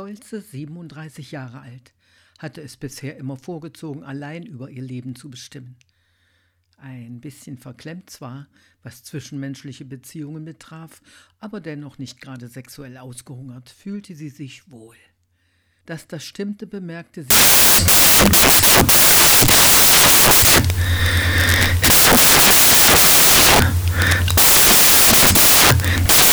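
From 17.30 s to the end at 26.32 s, the audio becomes loud, harsh broadband noise. Samples are built from the wrong bytes. Misordered bytes push rapid low bits into each value's top.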